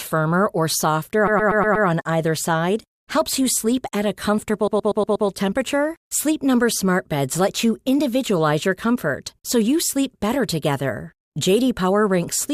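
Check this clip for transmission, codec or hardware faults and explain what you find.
The clip has a transmission fault: repeated frames, twice. From 1.27 to 1.87 s and 4.67 to 5.27 s, a 120 ms block replays five extra times. The speech stutters and stretches by 600 ms each time.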